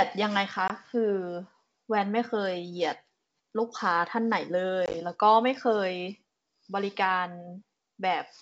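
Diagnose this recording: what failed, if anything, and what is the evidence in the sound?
The network stage failed, with packet loss on an ADPCM call carried over G.722 wideband coding. At 0.68 to 0.71 s the speech drops to a hard-edged silent gap of 20 ms, about two packets. At 4.86 to 4.94 s there is a cluster of about five losses totalling 50 ms, scattered over 80 ms with no run longer than 20 ms. After each hole the decoder's adaptive predictor and step size no longer match the sender's, so the speech returns with brief, slight distortion. It settles within a few tens of milliseconds once the adaptation re-converges.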